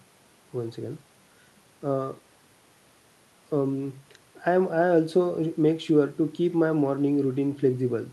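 Nothing technically wrong turns up in this speech recording; the faint room noise sits about 36 dB under the talking, and the call path's Opus coding carries the sound up to about 12 kHz, as you'd expect from an ordinary call.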